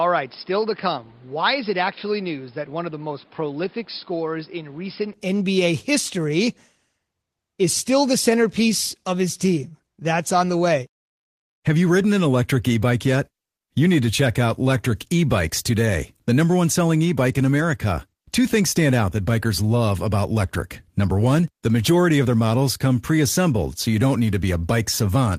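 Input switched to a poorer device, from 0.0 to 5.14 s of this speech recording: the opening stretch sounds dull and boxy, with nothing above 5.2 kHz, a level about 5 dB lower, and its own background noise sitting roughly 30 dB under the signal. At 5.14 s the sound opens up, with no gap at the change. The likely cause is the system capturing first from a narrower-band microphone or headset call profile before switching to the main input.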